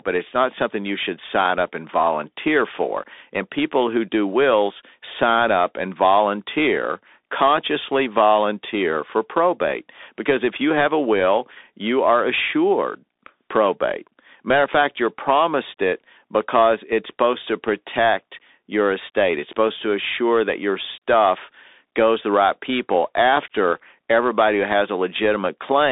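From start to end, the speech carries Bluetooth CVSD headset codec damage. The band runs about 250 Hz to 3.7 kHz with nothing above 3.8 kHz, and the one-bit delta coding, consistent with a 64 kbps link, leaves scratchy s sounds, slope-overload distortion on loud peaks, and granular hiss underneath.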